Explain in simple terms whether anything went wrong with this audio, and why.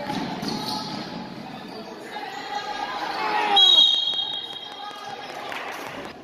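From 3.56 s to 6.06 s a train of clicks ticks over the sound, about five per second at a steady pace, roughly fifteen in all. Unlike random crackle, each click sounds alike and evenly spaced, pointing to a likely electrical cause such as interference or a faulty connection or power supply.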